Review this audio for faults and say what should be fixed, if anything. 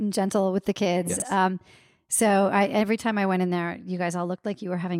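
At 1.16 to 1.22 s, just after "gentle with the", there's a brief jumbled, garbled flicker. This is chunks out of order: one 20 ms chunk played two chunks late, so nothing is missing but three hard joins break the sequence. Reorder chunks by sequence number before playback or writing, holding late arrivals in a jitter buffer.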